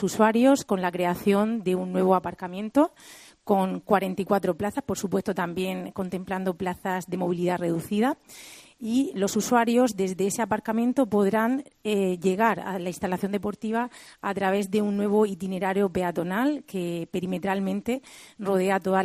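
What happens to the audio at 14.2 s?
Nothing goes wrong at 14.2 s; the audio carries on intact through that moment with no dropout, glitch or other fault.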